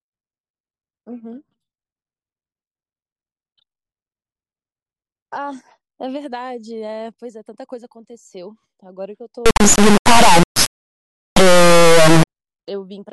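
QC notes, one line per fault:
9.46–12.27 s, integer read as float: the speech turns into a harsh, extremely loud square-wave buzz slamming between silence and the clipping limit. This points to 32-bit integer samples decoded as 32-bit floats.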